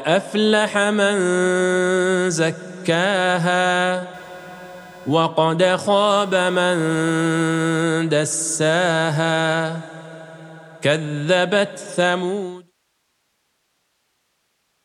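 Computer load shifts the audio ground from 4.14 to 7.84 s, adding computer activity noise: a buzz near 500 Hz, about 30 dB down.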